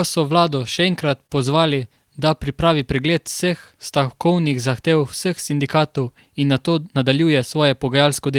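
From 0.75 to 1.32 s, between "so vlado" and "pozvali da", the speech catches and drags in four brief hitches, each a sliver of held sound where the flow should continue. These are repeated stalls (stutter): packets reached the receiver late, so its jitter buffer ran dry four times, and it filled each wait by extending the last sound. The fills total 60 ms, the longest 29 ms, about 11% of that span, and nothing is lost.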